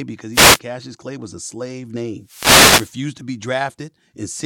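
Wireless microphone noise hits occur at 0.32 to 0.60 s and 2.23 to 3.00 s. The FM radio signal fades, so receiver noise rises as a swish of static over the speech.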